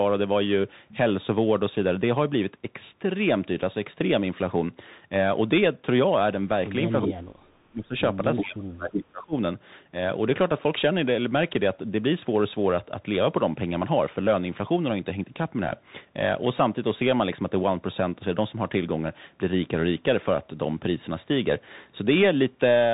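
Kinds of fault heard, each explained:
Bluetooth CVSD headset codec: throughout, one-bit narrowband headset coding removes everything above 3.8 kHz, leaving scratchy sibilants and a granular hiss.
Speech suppressed in double talk: at 6.91–7.95 s and 8.44–9.35 s the speech drops by up to about 35 dB, likely an echo canceller muting overlapping talk.
Echo leak: at 7.02–7.07, 8.36–8.44 and 8.92–8.96 s, brief copies delayed 368 ms return about 5–10 dB down, likely uncancelled loudspeaker pickup.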